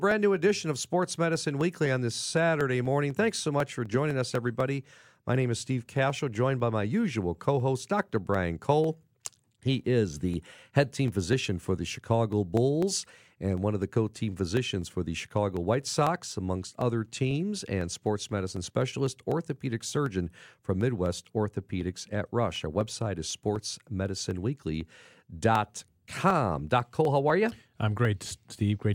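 A regular ticking runs through the speech from 0.11 s to 28.80 s, roughly four clicks a second, spaced 0.249 s apart and audible only while there is signal. These are periodic USB or driver dropouts: something stalls the audio path at a fixed interval, and each time about half a millisecond of audio is skipped outright, leaving a small discontinuity in the waveform. Around a hundred of them occur across the span.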